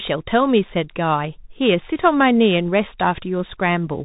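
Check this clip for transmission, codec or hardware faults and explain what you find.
One fault runs through the whole clip: Bluetooth CVSD headset codec damage. The speech is coded one bit at a time, each bit saying only up or down, with a step size that adapts as it goes. The rate points to a 64 kbps stream. Nothing above 3.8 kHz survives, so the speech sounds narrow and boxy. Loud high sounds change faster than the step can follow and distort. S sounds turn scratchy. A granular hiss sits under the speech throughout.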